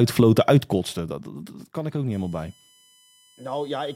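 From 0.6 to 1.12 s there's zipper noise: the level drops about 10 dB in unsmoothed steps, roughly a hundred a second, so you hear a fine ticking zip. Then at 2.12 s a USB whine starts and runs to the end, a fixed 1 kHz whine loudest at 3 kHz, sitting around 25 dB under the speech.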